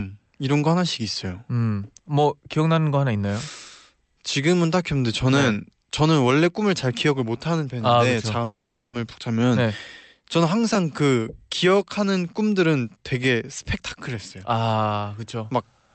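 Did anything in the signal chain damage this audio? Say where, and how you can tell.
Yes, at the network stage. From 8.43 to 8.95 s the speech breaks: the last sound is stretched into a fading buzz, then about 360 ms of silence, and it resumes with half a second lost. This is likely a long network dropout masked by receiver concealment.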